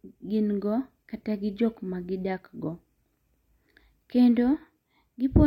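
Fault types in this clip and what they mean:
No faults detected.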